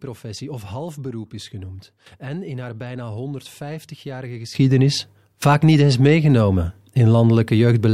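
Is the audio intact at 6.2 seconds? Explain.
No. At 6.2 s the speech and its background noise are both about 16 dB louder than before, a sudden gain jump that starts abruptly at 4.55 s and holds to the end. The likely cause is a digital gain step applied between two samples with no ramp.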